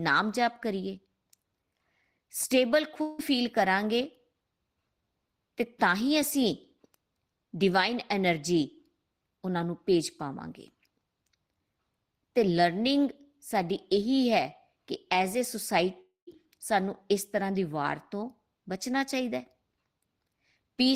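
Speech with two gaps where the sound turns to a fading buzz, at 3.01 to 3.21 s and 16.01 to 16.29 s. Each is likely a long network dropout. About 0.18 s and 0.26 s are lost. The second ends in roughly 0.12 s of silence.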